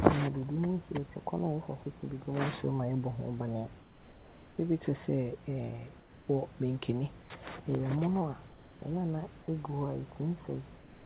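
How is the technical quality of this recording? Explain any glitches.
The recording has audible transmission glitches. It is narrowband telephone-quality speech, with nothing above 4 kHz, which fits a G.711 call codec. Steady room noise sits about 22 dB below the speech.

Sound dropped by the voice detector occurs at 1.84–1.86 s. For about 10 ms a fragment of speech is missing, and a 20 ms patch of flat noise sits in its place. The likely cause is the sender's voice activity detector briefly treating a low-level part of the speech as background and pausing transmission. The receiver then filled the gap with generated noise until the detector triggered again, so the speech briefly gives way to steady noise.

Comfort noise in place of the background appears in the pauses at 3.82–4.58 s, 6.0–6.28 s, 7.22–7.3 s, 8.48–8.82 s and from 10.78 s to the end. In each pause the real room background, about 21–23 dB below the loudest speech, gives way to a smooth, featureless hiss about 2–3 dB quieter. 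This is likely discontinuous transmission, where the receiver synthesises noise from occasional spectral updates, so the background texture flattens and steps down slightly whenever speech stops.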